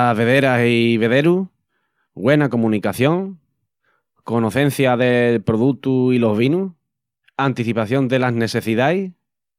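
No technical faults can be heard anywhere in the speech, so there are none to describe in time order.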